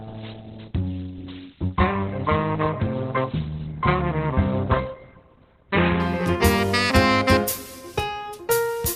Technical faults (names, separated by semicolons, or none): adaptive stream starting at a low bitrate